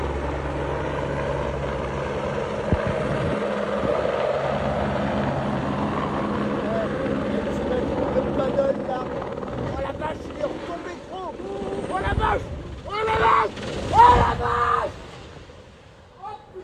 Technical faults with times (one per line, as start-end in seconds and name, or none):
none